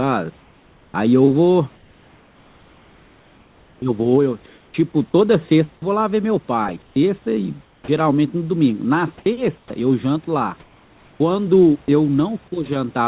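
From 1.76 to 4.74 s, the room background gives way to comfort noise in place of the background. The pauses likely stopped being sent, so about 2.3 s of real ambience becomes a flat, featureless hiss. At 3.77 to 3.82 s, an onset is clipped by the voice detector. About 50 ms of the start is missing, likely because the detector reacted late. The sound begins abruptly, with no soft lead-in. A shorter clip of 20 ms follows at 5.80 to 5.82 s. Comfort noise returns from 6.82 to 7.88 s, then from 9.18 to 9.70 s, and again from 10.60 to 11.88 s. Each time, the room texture turns to steady synthetic noise. At 7.82 to 7.88 s, another onset loses about 60 ms and starts hard. At 11.86 to 11.88 s, sound is dropped by the voice detector. A short sound, likely judged to be background, is replaced by noise and lost for about 10 ms.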